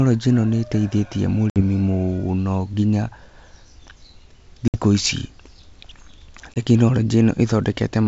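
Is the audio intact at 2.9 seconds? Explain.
Yes, the audio is intact at 2.9 seconds; the speech passes through G.722 wideband telephone coding at 64 kbit/s with no fault at that moment.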